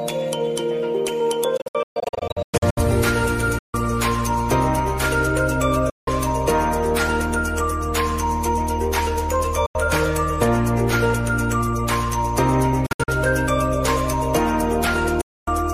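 Bluetooth dropouts at 1.57–2.78 s (scattered gaps, about 0.66 s lost), 3.58, 5.90, 9.66, 12.86 and 15.21 s cut the audio to silences, likely from late packets being discarded; playback resumes further on, as if it had kept running.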